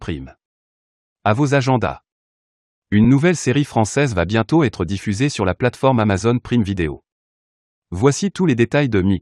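At 3.04 s, just before "nouvelle série française va", lost LE Audio frames leave a 7.5 ms noisy smear, fitting one frame, seen on a spectrogram as a thin streak blurring the harmonics.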